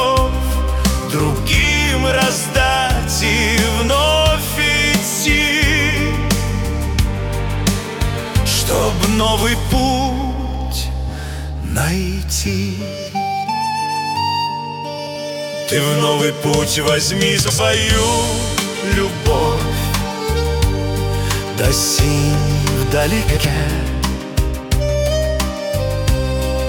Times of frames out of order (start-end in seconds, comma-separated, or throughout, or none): 14.98-15.16, 17.41-17.59, 23.28-23.46